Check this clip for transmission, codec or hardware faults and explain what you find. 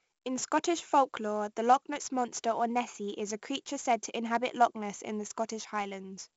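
One codec fault runs through the whole speech clip: 4-bit ADPCM compression, and the damage is heavy. Each sample is stored as a coarse 4-bit step from a predicted value, so the rounding error becomes gritty hiss that rises and falls with the speech's loudness and smears sharp attacks. Nothing reaches above 7.7 kHz, which points to a 16 kHz sampling rate and fits 64 kbps. Unlike a perceptual codec's swirly, warbling artefacts, this noise is steady and grainy.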